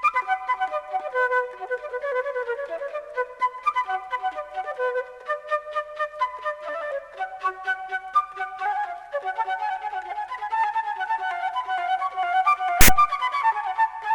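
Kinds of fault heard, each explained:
File tags played as audio: the player failed to skip a metadata block and fed its bytes to the output as though they were samples. Here the block holds text tags followed by zero padding, so at 12.81 s a loud, harsh rasp bursts in with hard edges, its waveform pushed off-centre to one side by the character bytes, then drops to dead silence where the padding is read, ending abruptly at 12.89 s, about 80 ms in all.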